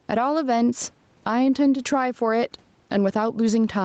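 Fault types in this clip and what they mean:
gain pumping: Input gain likely set too high drives a fast limiter on loud speech, ducking about 10 dB.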